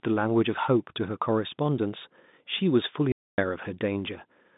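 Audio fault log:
3.12–3.38 s, packet loss filled with silence: a 260 ms hole with hard edges, its length fitting whole 20 ms packets, unlike a fade or smoothed concealment.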